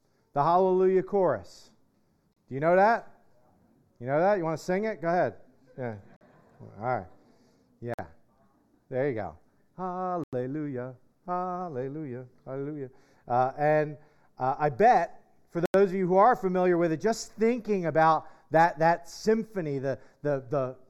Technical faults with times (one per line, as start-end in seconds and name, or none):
0.00-20.89 channel delay (comb filtering)
2.33-2.36 Bluetooth stall
6.16-6.21 Bluetooth stall
7.94-7.99 Bluetooth stall
10.24-10.33 Bluetooth stall
15.66-15.74 Bluetooth stall